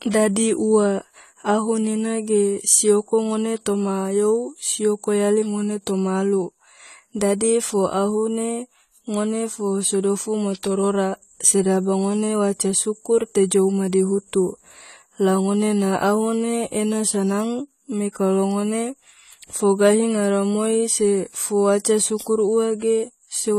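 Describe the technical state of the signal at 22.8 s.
At 22.8 s you're hearing the same thing that runs through the whole clip: the speech sounds dull and smeared, with a fizzy, warbly edge on sibilants and held sounds, and nothing at all above 14 kHz. That's most likely AAC compression, AAC-LC at a low rate, which fits roughly 32 kbps. At that budget the encoder drops the top band and quantises the rest coarsely, leaving gaps it patches with noise, and the damage is plainly audible here.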